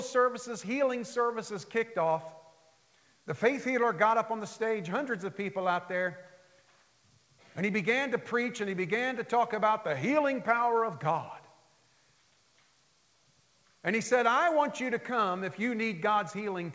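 Nothing's actually wrong here; the audio has simply come through a call path, and everything stopping at about 8 kHz fits a wideband G.722 codec at 64 kbps.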